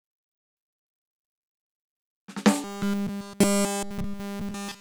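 From 2.64 s to 4.81 s the music collapses into robotic sound from repeated short buffers: a rigid, metallic buzz fixed at 200 Hz across the whole span. This likely comes from a starved stream looping the same 5 ms of audio while new material is skipped.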